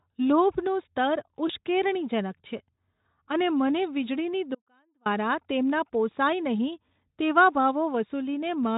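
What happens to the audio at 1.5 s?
At 1.47 to 1.51 s there is a brief VoIP packet loss concealed by the speech codec, which fits a single lost 20 ms frame. The Speex decoder fills the gap by repeating its last pitch and spectral shape at falling gain. This gives a short smear, a buzzy tone or coloured noise, before the sound recovers.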